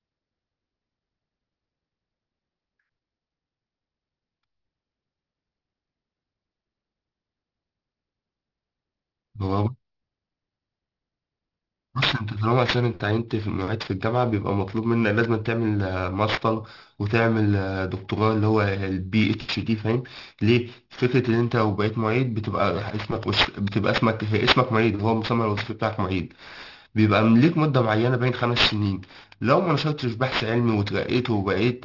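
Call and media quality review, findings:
Aliasing, throughout. Sibilants gritty and metallic, with harsh false tones crowding the top of the band, packed hard against a sharp edge near 6 kHz. Folded content fairly strong, about 10 dB under the speech. Probable component: resampler, fitting a drop to a 12 kHz rate with no anti-alias low-pass. Energy above 6 kHz reflected back down to unrelated pitches.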